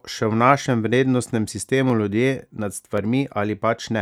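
Three sharp clicks cut through the speech, at 0.63 s just after "še v", at 1.90 s just before "ljudje nad", and at 2.98 s right after "ljudje nad". Each is a single thin tick with no gap you could hear. That's likely dropped samples: a tiny slice of the stream, under a millisecond, goes missing, so the waveform jumps straight to a later value and that step comes out as a click.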